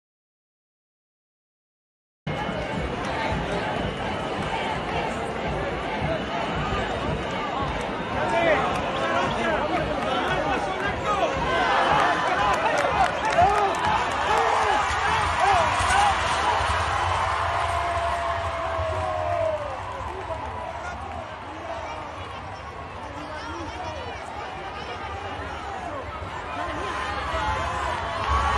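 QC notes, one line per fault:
0.00–2.27 s, audio dropout to silence: clip opens in silence, flat waveform and blank spectrogram without room tone, likely from input lost before the input returned.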